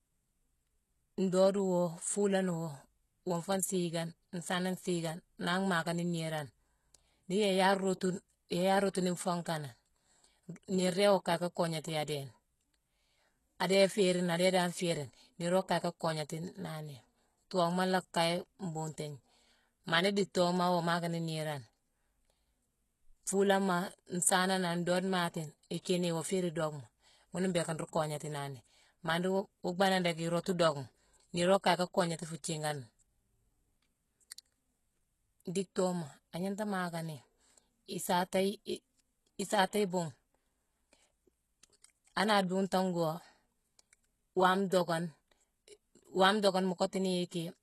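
Speech whose treble sounds synthetic throughout, with gritty, lispy s sounds and nothing above 12.3 kHz: likely HE-AAC compression rebuilding the top band by replication, fitting roughly 16 kbps.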